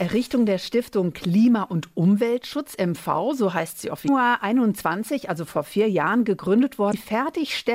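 At 4.05 to 4.09 s and again at 6.90 to 6.94 s, brief 40 ms bursts of damaged data in the compressed stream sound as chirps, squawks, clicks or short holes: the decoder misreads corrupted frames and hunts for the next header.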